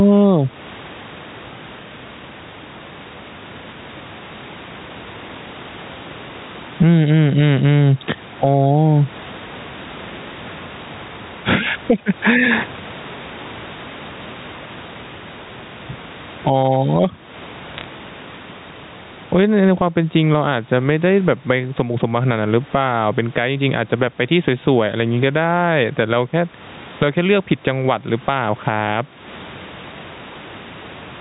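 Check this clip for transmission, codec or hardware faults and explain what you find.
Two faults stand out: gain pumping running through the whole clip, and a brief burst of bit errors on a digital phone line.

Gain pumping, throughout: loud and quiet syllables sit unnaturally close in level, giving a squashed, flattened delivery, with a swing of about 15 dB between the gaps and the speech. The likely cause is microphone gain set far too high, with a fast limiter or compressor clamping down on each loud sound and releasing in the silences.

Bit errors on a digital phone line, from 17.74 to 17.84 s: a short cluster of sharp ticks and crackle sits on top of the speech, which itself carries on unchanged underneath. On this G.711 A-law line, each flipped bit corrupts a single sample. Where the error lands on a high-order bit or on the sign of a loud sample, that sample jumps far from its true value and produces a click. 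The error rate here is a small fraction of a percent, concentrated into a tenth of a second, which is why it is heard as one crackly patch rather than scattered clicks.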